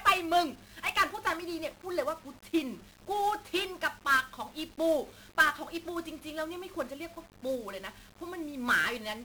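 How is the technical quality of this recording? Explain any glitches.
Technical quality is poor, with heavy coding damage across the whole recording.

1-bit DFPWM compression, throughout: each sample is reduced to a single up-or-down step on an adaptive level, the density fitting a 48 kbps stream. The coarse steps leave dense broadband noise, so the speech sounds fuzzy and crackly, with its treble smothered under hiss.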